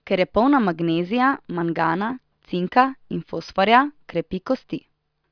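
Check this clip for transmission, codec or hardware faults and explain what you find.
Nothing jumps out here; I can't pick up any fault anywhere in the speech.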